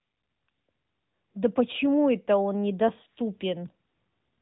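No technical faults are audible.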